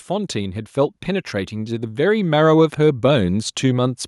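A speech recording with automatic gain rising throughout. From 0.07 s to 3.97 s, the level climbs by about 8 dB. Voice and background noise swell together. The gain control judged the input too quiet and kept raising its gain slowly.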